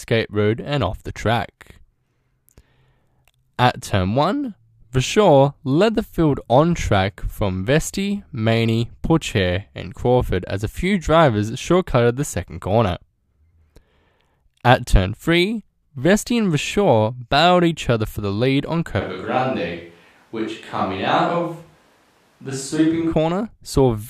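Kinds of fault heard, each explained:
Switch to a distant microphone: from 19.02 to 23.12 s, right after "for the lead on", the speech suddenly turns roomy and hollow, thinner in bass and about 5 dB quieter. It is likely a farther microphone, and unlike a plain level drop, it adds room sound.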